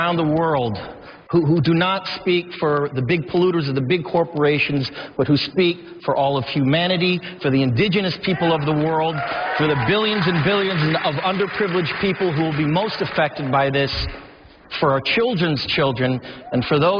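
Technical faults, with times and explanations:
No technical faults can be heard anywhere in the audio.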